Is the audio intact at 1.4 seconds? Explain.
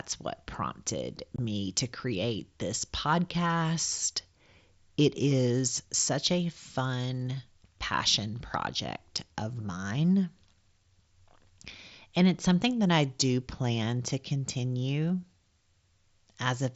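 No. Unconcealed Bluetooth headset packet loss at 1.36 to 1.39 s: about 22 ms of headset audio vanished and was replaced by silence or an idle pattern, leaving an abrupt-edged hole.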